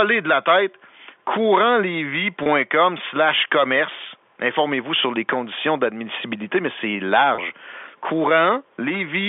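Gain pumping runs through the whole speech clip. The level swings by around 10 dB as the gain is pulled down on each loud sound. That pattern is most likely caused by input gain set far too high, with a fast limiter or compressor pulling it back on each peak. Loud and quiet passages sit close together and the speech sounds squashed. The G.711 mu-law telephone path limits the speech to a narrow 300 Hz to 3.5 kHz band.

Packet loss with pitch repetition occurs twice. At 2.43 s, just before "slash commerce", about 30 ms of audio drops out, which fits a single lost packet. The receiver fills the gap by repeating the last pitch period, giving a brief buzzy hold on the sound. The same thing happens at 7.35 s, right after "conditions d'admissibilité mais c'est", with another 30 ms gap bridged by a short buzzy repetition before the speech resumes.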